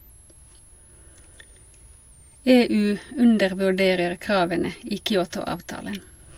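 A switching supply whistle runs through the whole speech recording: a faint high tone around 10 kHz, wandering between about 9.0 and 12.1 kHz, roughly 35 dB below the speech. A power supply whose switching frequency has dropped into the audible range is producing it.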